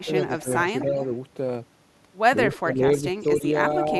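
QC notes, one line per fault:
0.00–0.43, 0.79–1.07, 2.53–2.57 and 3.20–3.38 s: echo leak. A faint copy of the speech trails it by about 0.26 s, roughly 20 to 30 dB below, likely far-end loudspeaker pickup left in by the echo canceller. On a spectrogram, a dim duplicate of the harmonic pattern appears, shifted right.
0.04–0.51, 2.62–3.45 and 3.87–3.96 s: speech suppressed in double talk. The speech dips by up to about 10 dB (about 5 dB in the last one) for a few hundred milliseconds in total, likely the echo canceller ducking during overlapping talk. On the waveform, the envelope is notched.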